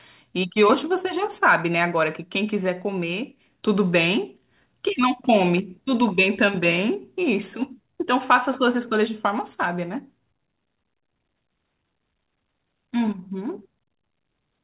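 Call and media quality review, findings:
No faults found in the speech; nothing above 4 kHz, consistent with a narrowband 64 kbps G.711 A-law call path, which is expected behaviour for that codec.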